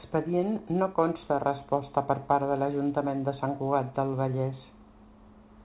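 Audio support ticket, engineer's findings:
Nothing stood out on listening to the speech, which comes over a G.711 mu-law call path at 64 kbps with nothing above 4 kHz.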